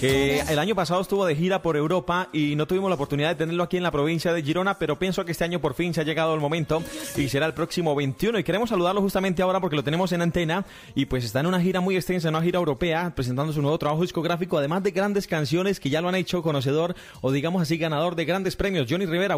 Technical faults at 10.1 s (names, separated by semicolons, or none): word clock ticks